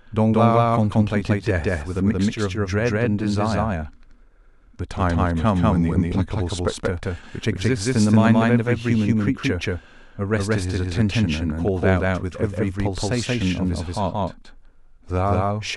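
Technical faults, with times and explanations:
Throughout: doubled audio track. The speech is heard twice, a dry full-band copy trailing about a fifth of a second behind at roughly equal loudness, likely a second capture path running late. Waveform envelopes repeat offset; spectrogram shows each syllable's harmonics echoed without decay.
4.93 to 6.74 s: drift correction step. Playback slows by 5.6% and pitch drops by about a semitone (99.8 cents), then returns to normal, likely clock-matching software adjusting its rate. Spectrogram harmonics step down abruptly, then return; waveform periods stretch accordingly.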